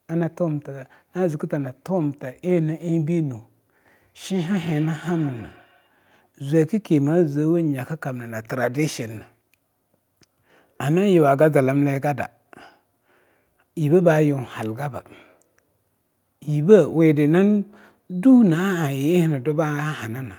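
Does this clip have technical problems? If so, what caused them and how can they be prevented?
Yes. Feedback echo between two devices occurs from 4.3 to 5.9 s: the speech comes back roughly every 150 ms, thin and ringing, at most about 25 dB below the speech. A second device on the call replays this microphone's signal, the microphone picks it up again, and the echo canceller cannot remove sound that another device plays. Prevent it by joining from only one device per room, or by muting the other device's speaker and microphone.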